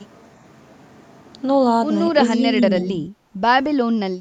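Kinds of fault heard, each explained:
Speech suppressed in double talk: The likely cause is an echo canceller that, with both ends talking at once, could not tell the near talker apart from the loudspeaker echo and pulled the whole microphone signal down. Between 2.41 and 3.06 s the speech sinks by roughly 10 dB in a broken, uneven way, adding up to around 400 ms of dipped or thinned sound before the level recovers.
Background gated by the echo canceller: While the loudspeaker was active, the echo canceller clamped the microphone hard, treating the room sound as echo to be removed. The background briefly falls away and then snaps back when the canceller releases. This happens from 3.34 to 3.41 s with a drop of about 13 dB, and again from 4.12 s to the end with a drop of about 15 dB, each lasting about 70 ms.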